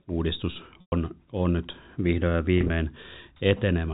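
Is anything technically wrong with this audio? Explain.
Yes. There is packet loss with pitch repetition at 0.81–0.92 s, just before "on nyt vihdoin ja", and at 2.58–2.70 s, just after it. Over the telephone-band G.711 path, the receiver filled each gap by repeating the last pitch period and fading it out. The first gap is 110 ms, longer than that roughly 50 ms fade, so the sound buzzes briefly, drops to silence, then cross-fades back. The second loses 80 ms scattered across 120 ms, in runs no longer than 20 ms, giving a slightly held, buzzy hold.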